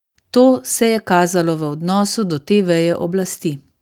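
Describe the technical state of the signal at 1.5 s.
At 1.5 s the signal is intact, with no dropout, clipping, glitch or other fault to be heard at that point.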